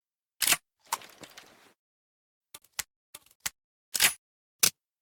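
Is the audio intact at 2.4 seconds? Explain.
Yes, at 2.4 seconds the audio plays through cleanly, with no dropout, click, distortion or other audible fault at that moment.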